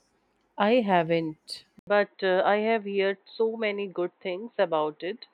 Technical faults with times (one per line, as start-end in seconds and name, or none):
1.79-5.33 input switched to a poorer device